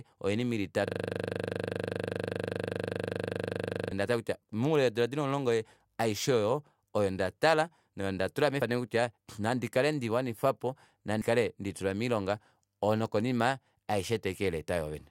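Right at 0.87 s the speech locks into a system hang loop that runs until 3.91 s. The playback side kept recycling the same 40 ms stretch of buffer while everything upstream stalled, repeating it about 76 times. At 25 repeats per second it comes across as a hard, rattling stutter.

After that come two bit error spikes, at 4.75 s and 7.09 s. Each is a single corrupted sample, a flipped bit that throws the value off by a power of two before it snaps back. You hear one crisp, broadband tick that has nothing to do with the speech around it.

Later, at 8.62 s and 11.22 s, there are compressed frames skipped. The decoder drops what sounds like a single frame, around 93 ms, which fits a fairly long codec frame, so the speech jumps ahead by about a tenth of a second.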